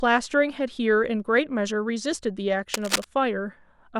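A speech recording with a burst of cable scratch noise from 2.74 to 3.04 s. For about 0.3 s, dense, uneven crackling and rustling sits over the speech. It is loud, only a little below the speech itself. The likely cause is a worn cable, connector or control being moved. As it shifts, its contact resistance jumps about rapidly. Those jumps put ragged bursts of noise straight into the signal path.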